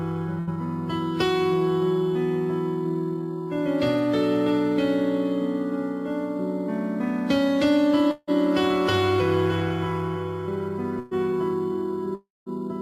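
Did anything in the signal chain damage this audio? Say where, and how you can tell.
Yes. Burst of packet loss at 0.39 to 0.50 s and 10.99 to 11.14 s, a network fault: the receiver extends the last sound as a fading buzz or hiss for about 80 ms and 120 ms, then audio resumes with those stretches missing.

A long network dropout is the likely cause at 8.11 to 8.30 s and 12.15 to 12.49 s: concealment fades out into silence, briefly at first, then for about 0.19 s in the second. Roughly 0.16 s and 0.32 s of audio never return.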